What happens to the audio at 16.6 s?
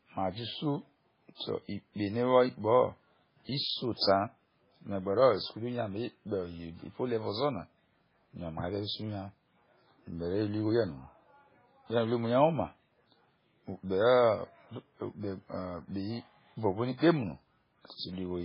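The speech sounds watery and swirly, with nothing above 5.3 kHz, as it does throughout; likely heavy MP3 compression at a very low bitrate, near 16 kbps.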